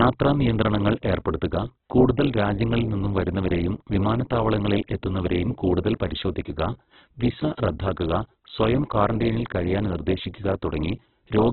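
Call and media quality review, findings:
Opus compression, entire clip: speech grainy and rough, with tonal parts turned to noise. Spectrogram shows a hard ceiling with nothing above 4.2 kHz and few holes below, harmonics smeared into noise-filled bands. Likely Opus CELT mode, narrowband, consistent with roughly 8 kbps.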